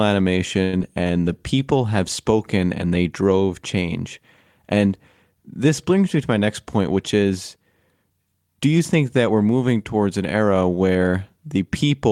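From 0.63 to 0.74 s a short stall from a late packet holds the last sound for 96 ms until the packet arrives, adding 96 ms of delay; the spectrogram shows frozen, flat harmonics.

At 0.79 to 0.81 s a short concealed packet loss drops 50 ms, bridged by only 11 ms of synthesized fill that cuts delay by about 40 ms, leaving a brief smear.

Between 1.25 and 1.60 s, just before "have spoken and they", a jitter buffer slow-down repeats pitch periods, adding 46 ms at 89% speed. The harmonics stretch out horizontally with unchanged spacing.

From 6.39 to 7.57 s, right after "brings me to my", a jitter buffer speed-up trims about a tenth of a second at 107% speed, so the sound is hurried and the waveform's syllables are packed closer.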